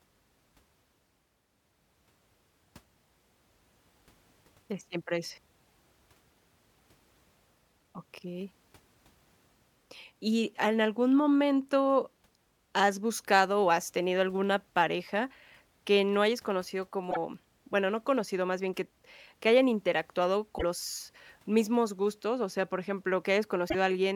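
At 17.10 to 17.17 s, 20.57 to 20.63 s and 23.68 to 23.75 s the speech skips forward and leaves a brief glitch, each about 60 to 70 ms, or two to three 26.1 ms frames. The likely cause is a broken MP3 bit reservoir: frames went missing, and the next ones reached back for borrowed bits that now belonged to other frames. On a spectrogram each shows as a narrow, frame-aligned block breaking the harmonics. The waveform shows a matching discontinuity.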